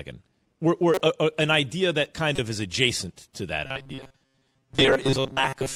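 At 0.94 to 1.01 s, just before "uh uh an idea", a corrupt frame decoded produces a short chirpy burst peaking around -15 dBFS. Damaged bits in a few compressed frames were decoded anyway, so energy lands at wrong frequencies. A second, briefer blip at 2.35 to 2.39 s, between "an idea that kind" and "of is adjacent to", is louder, near -10 dBFS, and spans a couple of frames. Unlike a dropout or a click, each event lasts only as long as the damaged frames.

From 3.66 s, right after "is adjacent to that", until the end, the speech turns into a rigid, metallic buzz locked at 134 Hz that still loosely tracks the syllables. This is robotic sound from repeated short buffers, likely caused by audio arriving too slowly, so a fragment of about 7.5 ms keeps being replayed while roughly two thirds of the real signal is skipped. Unlike the corrupt frames, it is sustained, and its pitch stays fixed instead of jumping around.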